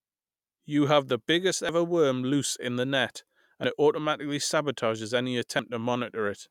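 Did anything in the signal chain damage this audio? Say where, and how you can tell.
Yes: audio missing between chunks, likely at the buffer stage. Every 2 s (1.69, 3.64, 5.59 s) roughly 50 ms vanishes and the edges join directly, with none of the silence a dropout leaves.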